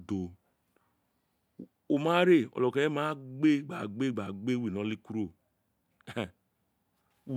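No technical fault can be heard anywhere in the recorded speech, and the signal stays continuous and undisturbed throughout.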